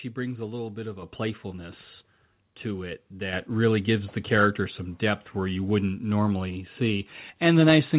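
At 1.02 s, between "a little bit of" and "playfulness to it", the microphone volume steps up by about 6 dB, then again by about 5 dB at 3.33 s before "really gives the character". The call software raised the input level mid-phrase, so voice and background jump together. The narrowband call path tops out at 4 kHz throughout.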